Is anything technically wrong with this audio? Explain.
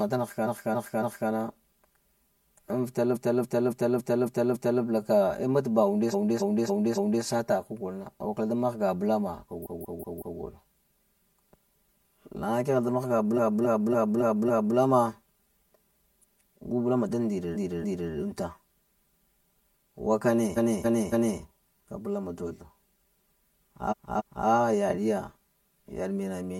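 Yes, there are two faults. Channel delay (comb filtering) runs throughout: one channel lags the other by about 5 ms, and summing them to mono cancels shared content at evenly spaced frequencies, the first notch near 100 Hz, so the speech sounds hollow and phasey.

Repeated frames occur at 0.42–1.26, 3.12–4.79, 6.09–7.20, 9.62–10.36, 13.33–14.73, 17.51–18.07, 20.53–21.37 and 23.87–24.43 s. A block of compressed frames gets replayed, 278.6 ms long except 185.8 ms at 9.62 s, repeating two to six times, so the speech stutters and each event adds about 0.6 to 1.7 s.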